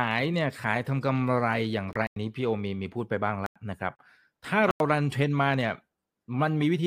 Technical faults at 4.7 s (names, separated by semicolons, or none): block of digital silence